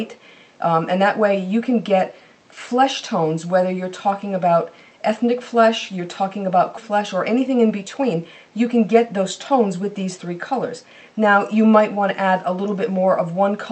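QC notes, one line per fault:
6.77 s: skip ahead. Playback jumps forward with no gap filling it, so roughly 0.7 s of sound is simply missing. The audio on either side is butted together almost directly. This fits a jitter buffer that discarded a backlog of queued audio to cut its delay.
7.37–8.14 s: jitter buffer speed-up. The receiver trimmed many short pitch-period slices in quick succession, removing about 70 ms in total. The sound runs around 7% fast at unchanged pitch and feels hurried. This points to a buffer shedding excess latency.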